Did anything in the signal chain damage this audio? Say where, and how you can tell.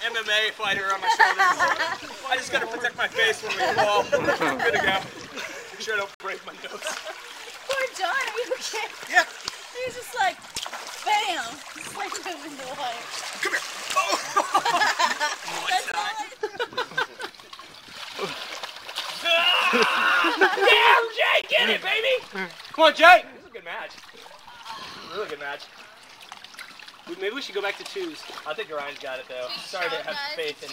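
Yes. Sound cuts out abruptly at 6.14–6.20, 15.92–15.94 and 21.42–21.44 s. These are blocks of digital silence at the buffer stage, from an unfilled output buffer or invalid calculated values.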